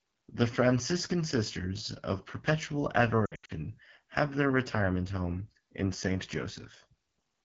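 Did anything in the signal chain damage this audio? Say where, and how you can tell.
Yes. The codec stage did. AMR wideband (HD Voice) coding is plainly audible throughout the speech. It sounds rough and raspy. That fits one of the lowest AMR-WB modes, around 8.85 kbit/s, where the pulse-driven vocal tract model runs short of bits.

The radio link did too. Lost AMR speech frames break the speech between 3.25 and 3.52 s, just before "have their retirement home". About 180 ms is missing, scattered over 240 ms, with the longest gap 80 ms. The decoder repeated the last good settings at falling gain, so the sound warbles and dips.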